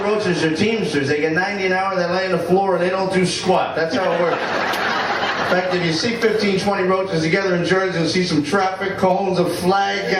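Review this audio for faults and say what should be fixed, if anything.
No faults turn up in this audio, so nothing needs to be fixed.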